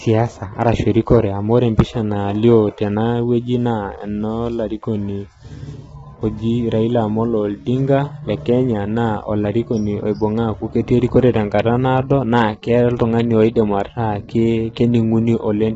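Throughout, the speech sounds rough and grainy, with noise between harmonics and nothing above 7.7 kHz. This is likely heavy low-delay AAC compression, fitting roughly 16 kbps.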